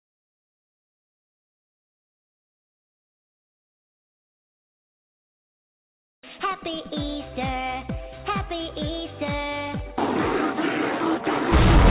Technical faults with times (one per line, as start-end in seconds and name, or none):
none